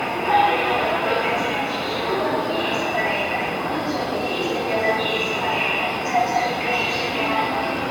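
Sounds carry generation loss throughout: a swirly, hollow smear with blurred attacks, likely from repeated lossy re-encoding, around five passes, consistent with 96 kbit/s AAC-LC. A spectrogram shows nothing above 17 kHz, with patchy holes and smeared transients.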